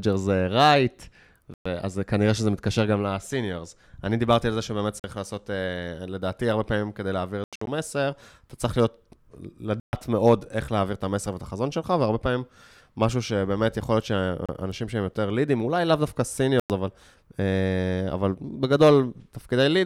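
Speech broken by six silent holes, at 1.54, 5.00, 7.44 (broken into several gaps), 9.80, 14.46 and 16.60 s, lasting 29 to 160 ms, likely a Bluetooth dropout from late packets.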